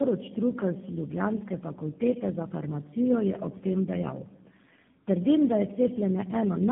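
Throughout the recording, the speech passes through tandem speech coding: it was decoded and re-encoded at each network border, with four low-rate speech coders in a row, the roughness suggesting GSM full rate twice, then G.729A, then AMR-NB at around 10.2 kbit/s. Each coder inherits the previous one's errors, so the voice sounds rough, muffled and warbly, with nothing above 3.7 kHz.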